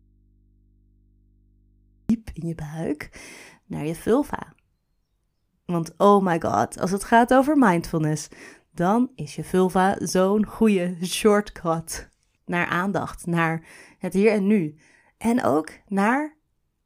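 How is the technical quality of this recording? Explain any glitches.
The recording has one glitch, at the very start. From 0.0 to 2.10 s the speech is missing in an audio dropout to a faint residue: only mains hum remains, around 40 dB below the speech. The likely cause is a lost signal feed while the input stayed live. The abrupt return sets it apart from a pause or fade-in.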